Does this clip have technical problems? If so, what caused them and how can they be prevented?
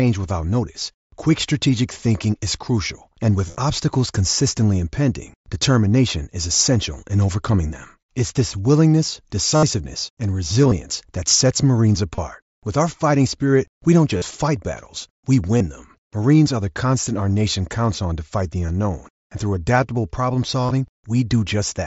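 Yes: concealed Bluetooth headset packet loss, at 3.48–3.56 s, 9.56–9.63 s, 10.63–10.72 s, 12.15–12.18 s, 14.17–14.22 s, 15.58–15.61 s (after "fight battles we"), 18.67–18.69 s (after "on to fight the") and 20.61–20.71 s (after "and through adaptable problem"). Lost headset packets, up to about 68 ms at 9.56 s and 20.61 s, were filled by repeating recent waveform. The longer runs of fill sound buzzy with a brief warble on recovery. On a spectrogram they appear as flat, repeated harmonic bands, and on a waveform as periodic copied cycles. The mSBC link is carrying wideband audio. To prevent this, keep the headset close to the phone and away from Wi-Fi congestion or body blockage.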